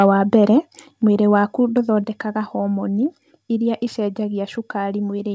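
Right at the start, from 0 to 0.06 s, just before "wa mbere mwĩrĩ waku", the peaks get flattened with a harsh crackle. That's microphone overload, likely from input gain pushing the converter about 2 dB past its limit and clipping a small share of samples. Then at 1.02 s, between "wa mbere" and "mwĩrĩ waku", the speech and background drop about 4 dB in one step. That's the microphone volume stepped down, likely the call software cutting input gain after that loud start. Through the G.722 call path there's nothing above 8 kHz.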